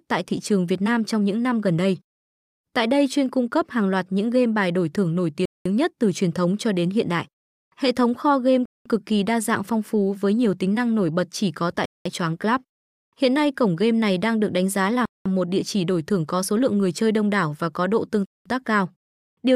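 Speech delivered in 3-second chunks with a gap between chunks leaves 200 ms silences at 5.46, 8.66 (after "thống kho game"), 11.86, 15.06 and 18.26 s.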